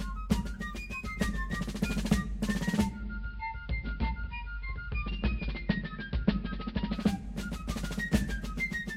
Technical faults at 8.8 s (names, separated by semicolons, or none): none